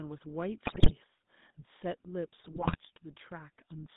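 Speech, carried throughout by the GSM full-rate codec: buzzy, gravelly roughness, with a spectrogram showing nothing below 150 Hz or above 3.7 kHz, a texture that fits a 13 kbps GSM channel. GSM bit errors corrupt decoded frames from 0.64 to 0.93 s and 2.40 to 2.80 s, producing squawks and pops that show as sudden level spikes and smeared, distorted spectral bands.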